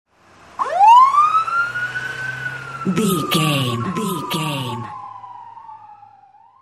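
From 3.80 s to the end there's a doubled audio track: a second, full-band copy of the audio cuts in abruptly, running about a second behind and a few dB quieter, with no decay or room colour. It's likely a second capture path or an edit leaving two copies out of step.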